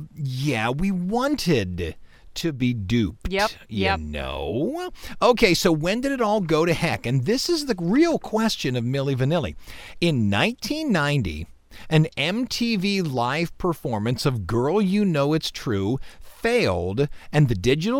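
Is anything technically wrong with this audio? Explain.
Yes. From 2.41 to 2.62 s the speech abruptly dips by about 6 dB, then snaps back. This is likely one channel dropping out: with one stereo side lost, the mono sum keeps only half the shared signal, so the level halves.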